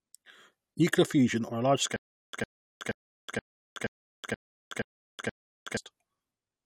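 A stutter with silent gaps runs from 1.96 s to 5.77 s, starting just after "a large". A fragment of speech about 104 ms long plays, then drops to dead digital silence for about 372 ms, and the same fragment returns every 476 ms, eight times in all. The likely cause is a stalled player or stream that replayed its last buffered piece at each retry and then ran dry, so the speech belonging to that stretch never arrives.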